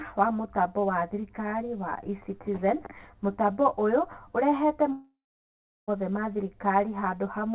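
Throughout the speech, channel delay (comb filtering) gives a hollow, phasey tone: one channel trails the other by roughly 10 ms, and summing them cancels energy at evenly spaced frequencies starting near 50 Hz. A spectrogram shows fixed horizontal notch stripes below the 4 kHz band edge of the call audio.

From 4.92 to 5.89 s comes a long network dropout, likely the cause of the lost audio. The waveform shows a short fading buzz or hiss continuing the last sound, then about 0.74 s of near-flat silence before speech resumes with the missing stretch gone.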